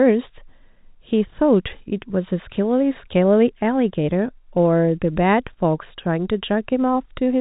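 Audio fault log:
No fault is logged for this speech clip.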